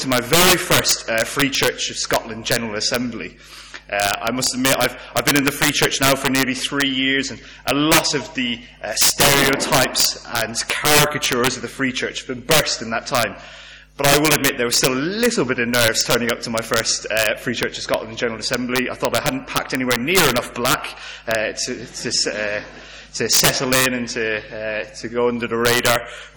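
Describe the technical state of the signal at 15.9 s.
Integer overflow runs throughout, including 15.9 s: about 11 dB of overdrive wraps rare peaks to the opposite sign instead of limiting them, cracking sharply on loud sounds.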